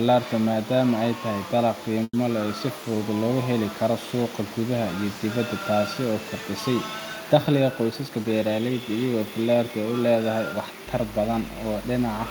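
From 2.03 to 2.14 s the speech stops and the last sound is held as a fading buzz, ending in about 30 ms of silence before resuming where it left off with nothing lost. This is a call audio freeze, likely from delayed packets draining the jitter buffer.

Between 7.33 and 8.33 s a jitter buffer speed-up runs the speech at about 109% of normal rate with pitch unchanged. The receiver trims short pitch-period slices to shed roughly a tenth of a second of excess buffered delay, so the passage sounds hurried.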